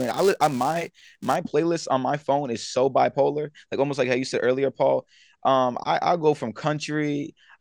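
Right from the start up to about 1.36 s, just before "playlist on my phone", there's a filter restarted on every block. The filter drops its memory at each block boundary and begins again from silence, so each block opens with a tiny transient. Those land at about 345 Hz, which fits a 128-sample block, and together they come across as a buzzy rasp riding on the speech, louder where the speech is louder.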